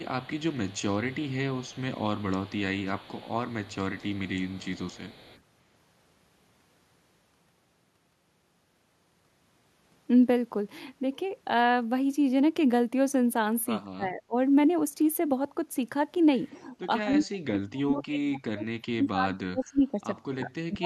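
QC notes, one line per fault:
0.0–2.6 s, 2.79–3.76 s and 3.95–5.41 s: echo leak. A faint delayed copy of the speech trails it by 181 ms, about 30 dB below the talker. It likely comes from a far-end loudspeaker whose echo canceller let part of the pickup return down the line.
13.94–14.36 s and 16.52 s to the end: speech suppressed in double talk. The speech dips sharply, by around 30 dB in the first stretch and around 40 dB in the second, which lasts roughly four seconds. Likely the echo canceller mistook the talker for echo while both sides spoke.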